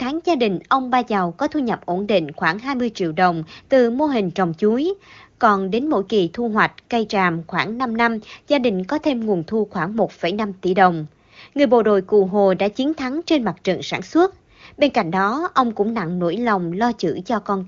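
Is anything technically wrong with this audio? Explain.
No, nothing technically wrong can be heard here.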